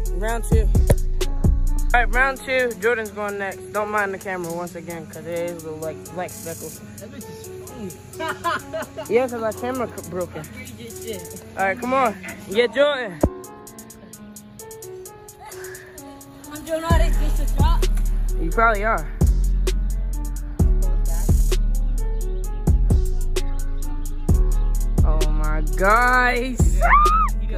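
No technical faults can be heard anywhere in this audio. Nothing in it calls for a timestamp or a closer look.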